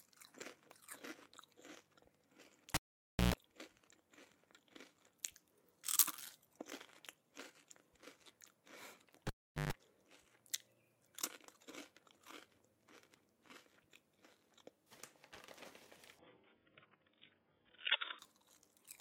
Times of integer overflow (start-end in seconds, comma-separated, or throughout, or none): none